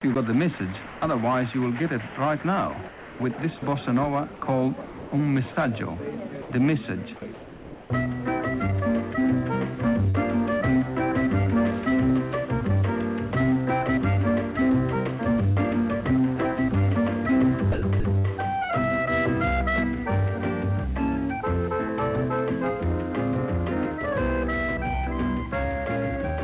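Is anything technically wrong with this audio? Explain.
Yes, there are two kinds of fault. The audio, carried over a G.711 mu-law call path with nothing above 4 kHz, shows both.

Sound chopped by the voice detector appears at 0.58–1.02 s, 2.88–5.56 s, 6.42–7.9 s and 17.72–18.26 s. The sound turns choppy, with pieces dropping out. The likely cause is the sender's voice detector switching transmission off and on, with comfort noise standing in for the gaps. About 180 ms is replaced in the first stretch, 720 ms in the second, 700 ms in the third and 200 ms in the last.

Short concealed packet loss occurs at 10.10–10.16 s and 15.52–15.58 s. Each is a brief smear or wobble where the sound seems to stall momentarily before rejoining. About 40 ms of audio failed to arrive in time, so the receiver extended the preceding sound to bridge each hole and then crossfaded back into the real signal.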